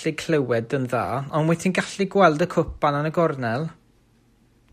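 No technical faults can be heard in this speech recording at any point.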